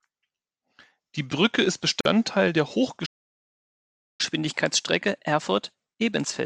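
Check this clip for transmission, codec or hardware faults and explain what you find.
Three faults are present in this speech clip.

From 2.01 to 2.05 s there is a gap at a join of encoded pieces. Encoder delay and padding left 45 ms of silence with smeared edges.

From 3.05 to 4.21 s a playback stall silences the speech mid-flow for about 1.1 s. The player likely ran short of data.

From 4.21 s to the end, catch-up at higher speed resamples the backlog at 1.1 times normal. Speech sounds hurried and roughly one and a half semitones higher.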